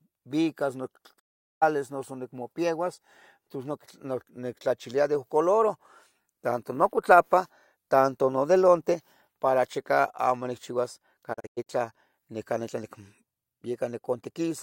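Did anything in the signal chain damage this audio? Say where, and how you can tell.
Yes. The speech drops to silence with a quick fade of about 20 ms from 1.18 to 1.64 s, then again from 11.32 to 11.68 s as several short holes, the longest 96 ms. This is digital broadcast dropout at the reception stage. The receiver lost signal or rejected corrupted frames and muted until clean ones arrived. About 416 ms and 192 ms of programme are simply gone, which fits whole frames of roughly 32 ms each.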